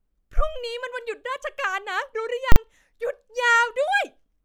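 At 2.52 s the speech is hit by invalid numbers at full scale: a calculation produced infinite or invalid values that were pinned to the largest positive or negative value for 40 ms, until 2.56 s. The block is so short that it sounds like one hard bang. Unlike ordinary clipping, which flattens loud peaks while the speech continues underneath, this output holds flat at one extreme value, far beyond the speech peaks, and carries no speech at all.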